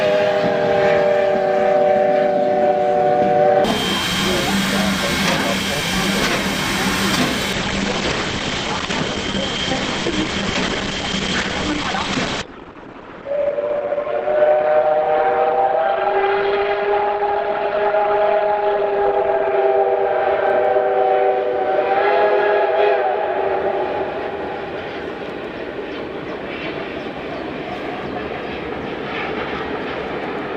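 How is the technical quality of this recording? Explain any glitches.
The recording has one glitch, a twelve-second stretch of reduced quality in the middle.

From 7.53 to 19.53 s, an adaptive stream at a lower bitrate takes over after the connection slowed, which fits a step down from 64 to 16 kbit/s Opus. The sound abruptly turns dull and artefact-laden, with no gap. A spectrogram shows a flat ceiling at 8.6 kHz, while the waveform stays continuous.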